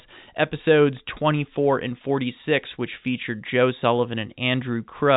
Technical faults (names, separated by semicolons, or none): none